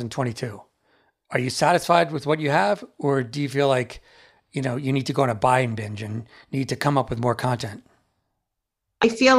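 No technical faults can be heard anywhere in this speech recording. There is nothing in it to place on the timeline or describe as a problem.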